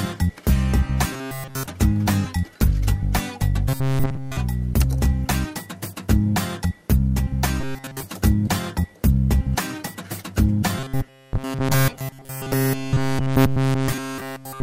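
A rigid, metallic buzz at 133 Hz replaces the sound from 1.12 to 1.66 s, 3.69 to 4.37 s, 7.61 to 8.03 s and 10.79 to 14.62 s. This robotic sound from repeated short buffers is likely caused by audio arriving too seldom, so a roughly 7.5 ms slice is looped over essentially the whole of each stretch.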